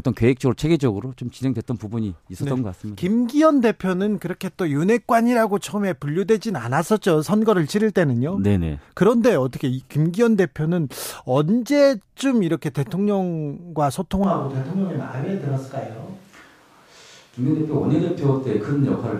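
A speech recording. At 14.24 s the sound changes abruptly. The voice turns roomy and hollow, and the low end thins out. Loudness stays about the same, so someone has likely evened out the level. Room noise comes up behind the voice, sitting roughly 35 dB below it. The change lasts to the end of the clip. This is most likely a switch to a distant microphone, with the close one failing or being dropped.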